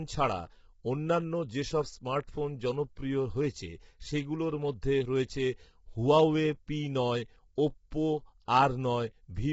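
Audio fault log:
Throughout: low-delay AAC compression, likely AAC-ELD near 16 kbps; short frames smear pitch harmonics, so speech turns rough and grainy, with noise between harmonics and nothing above 7.7 kHz.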